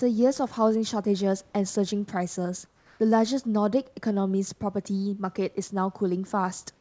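From 2.66 to 3.00 s, the room background drops out and a steady, featureless hiss about 3 dB quieter replaces it, likely comfort noise in place of the background during a transmission pause.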